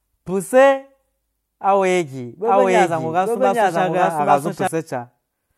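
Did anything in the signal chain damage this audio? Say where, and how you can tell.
Yes. From 2.45 to 4.67 s the speech plays twice, a full-band copy trailing by about a second at roughly equal level: a doubled audio track, likely from a second, slower capture path or a misaligned edit. Unlike echo, the copy has no decay or room colour and starts and stops abruptly.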